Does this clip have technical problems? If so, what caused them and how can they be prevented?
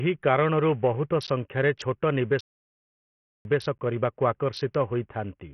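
Yes. Throughout the speech, Bluetooth SBC compression is audible: what remains carries a gritty, coarse texture, with the top sub-bands thinning and flickering, which fits heavy damage at around 48 kbps. The likely cause is a small bit pool, where SBC's simple allocation starves the weaker high bands and quantises the rest roughly. Preventing it means raising the bit pool or using a better Bluetooth codec.

A gap between chunks appears at 1.27 s, right after "କାରଣରୁ ବହୁତ", and again at 3.78 s. Each is a 12 ms hole, and the spacing fits audio delivered in 2.5-second chunks, with silence left at each join rather than any sound being lost. Padding or a late start on each chunk opens the hole. Preventing it means having the player queue the next chunk gap-free and strip any codec padding.

A playback stall runs from 2.41 s to 3.45 s, cutting the speech off mid-flow for about 1.04 s before it resumes. 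The output simply went silent, most likely because the player ran out of buffered data or its audio thread was blocked until it recovered. Preventing it means keeping a deeper buffer and running the audio thread at high priority, free of blocking work.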